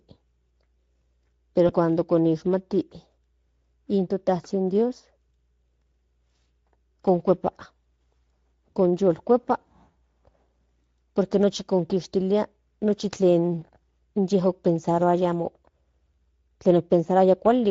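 The whole clip carries the Speex codec sound: a hoarse, grainy edge on the speech, with the top end filled in by a noise-like texture rather than real detail. That damage is plainly audible and fits a mid-rate mode around 16.8 kbps.

At 1.67 s there's a blip of VoIP packet loss concealed by the speech codec. The decoder stretched its last pitch and filter into a brief fading smear, and the speech stays a bit off until about 1.75 s. That points to a single lost 20 ms frame.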